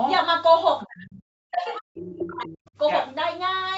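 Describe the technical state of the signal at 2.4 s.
At 2.4 s the speech is turned down, by as much as roughly 40 dB, within a span of speech suppressed in double talk from 1.50 to 2.57 s, likely an echo canceller turning down this talker along with the loudspeaker echo. Beneath it, the other side's voice leaking through runs from 1.99 to 2.56 s at roughly 10 dB below the speech, as a second voice that the canceller likely did not fully remove. On a spectrogram it shows as a second set of harmonics.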